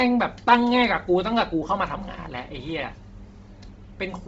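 Bluetooth LC3 compression runs throughout the speech, from start to end. The sound has nothing above 7.7 kHz, and what remains carries a breathy, grainy edge with heavy codec damage. This is likely a Bluetooth LE Audio link. LC3 codes the signal in short 7.5 ms transform frames and, at a rate that sounds to be around 24 kbps, zeroes much of the upper spectrum and fills it with synthetic noise.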